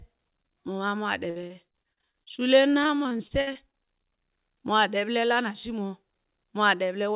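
From 1.3 to 4.19 s the speech breaks up with repeated packet loss, giving a robotic sound. Some 27 short holes, the longest 60 ms, are patched by stretching the preceding sound, about a fifth of that span. The steady string of smeared repeats distinguishes it from one isolated dropout. Above it all, nothing passes beyond 4 kHz, which fits a narrowband G.711 call path.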